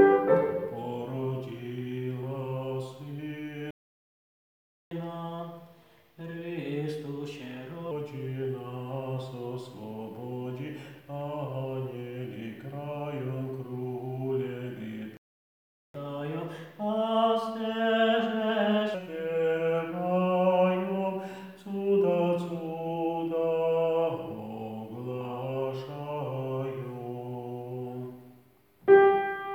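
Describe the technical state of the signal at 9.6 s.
At 9.6 s the signal is intact, with nothing to hear in the way of a dropout, click, distortion or other technical fault.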